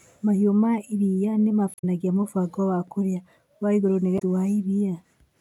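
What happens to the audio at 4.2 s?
Right after "kũrĩa wa igũrũ nĩ", from 4.15 to 4.22 s, there is damaged data in a compressed stream. For about 66 ms the decoder is fed corrupted bytes, misreads the affected frames and loses sync until it finds the next valid frame header. The result is a short chirp, squawk, click or hole breaking through the speech. The waveform has an abrupt discontinuity at both edges.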